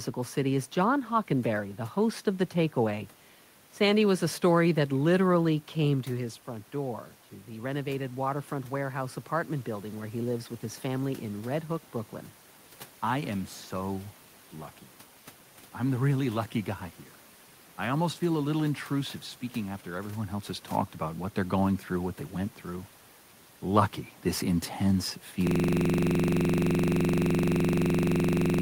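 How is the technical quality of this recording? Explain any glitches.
The recording has two technical faults: a gain ramp early on and a hard freeze at the end.

From about 6.1 to 9.8 s there is automatic gain rising. The talker moves back around 6.0 s, dropping the input about 10 dB, and the gain control responds by climbing about 5 dB over several seconds. Voice and room noise swell together as it does.

From 25.47 s to the end there is a system hang loop. The machine stalls while the audio hardware keeps replaying one 42.67 ms buffer, which fits a 2048-sample buffer, dozens of times. This produces a steady 23.4 Hz buzzing stutter in place of the speech.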